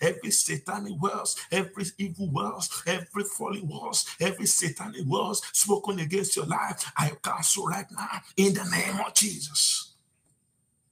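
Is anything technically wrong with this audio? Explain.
No, nothing is technically wrong with this audio.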